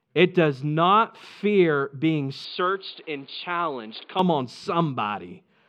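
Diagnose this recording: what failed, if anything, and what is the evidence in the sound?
After "does not fear being", 2.45–4.19 s turns boxy and quieter with no gap: likely an input switched to a poorer device. The spectrogram empties above 4.8 kHz; the waveform shrinks, over a raised noise floor.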